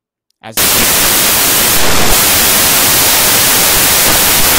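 Loud broadband noise swamps the speech from 0.57 s to the end, a case of samples built from the wrong bytes, where misread bytes make the low bits dominate.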